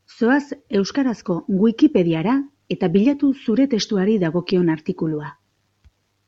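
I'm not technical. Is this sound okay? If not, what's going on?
Yes, nothing in this speech recording points to a technical problem with how the sound was captured or passed along.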